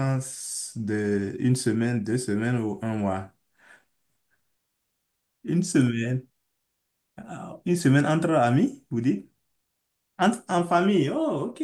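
No technical faults can be heard anywhere in this recording.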